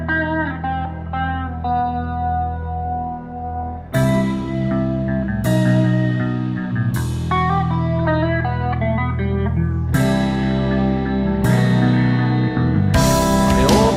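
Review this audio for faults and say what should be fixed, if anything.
Call bitrate drop, from 2.62 s to 4.73 s: the audio turns coarser and duller for about two seconds, which fits the encoder falling from around 64 kbps to around 25 kbps after the call's bandwidth estimate dropped. With so few bits, the codec quantises the signal more roughly and trims the upper frequencies until the rate recovers near 4.7 s. To prevent it, give the call a steadier network path and set a higher minimum bitrate so brief estimate dips don't starve the encoder.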